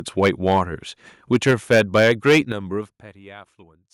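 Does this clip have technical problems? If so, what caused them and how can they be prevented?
Yes. Microphone overload occurs from 0.22 to 0.58 s and again from 1.32 to 2.39 s. The loudest syllables take on a harsh, crackling edge because their peaks are sheared flat. The first stretch runs about 4 dB past full scale, with a small share of samples flattened. The second runs about 7 dB over and is heavier, with several percent of samples cut. The likely cause is a microphone input gain set too high, so the converter runs out of headroom. To prevent it, lower the input gain until the loudest speech peaks sit well below full scale.

Microphone volume stepped down happens at 1.51 s and at 2.52 s. Both the speech and the background drop abruptly, by about 3 dB at the first step and about 8 dB at the second. Each drop falls during or just after the overloaded passage, which points likely to the call software's automatic gain control reacting to the distortion by cutting the device's input volume in one jump. 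To prevent it, set a sensible fixed level and disable automatic microphone adjustment.

Zipper noise runs from 2.77 to 3.20 s, while the level falls by roughly 15 dB. A fine ticking buzz rides on the sound during the fade. The level moves in hundreds of tiny discrete steps per second, and each unsmoothed jump adds a small click. To prevent it, apply gain changes through per-sample interpolation or a short smoothing ramp rather than stepping them.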